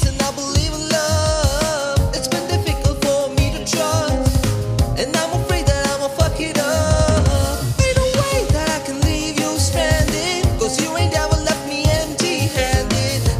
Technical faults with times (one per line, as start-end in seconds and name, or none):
none